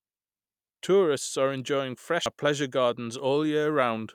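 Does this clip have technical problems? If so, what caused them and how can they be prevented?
Yes. Damaged data in a compressed stream produces a brief blip at 2.26 s, right after "are enjoying". At that point the compressed speech contains corrupted bytes, lost, zeroed or overwritten. The decoder misreads the affected frame, loses sync, and has to hunt for the next valid frame header before playback resumes cleanly, which is heard as a short glitch. Preventing it means delivering the file over a checksummed, error-corrected transfer and verifying its integrity before decoding.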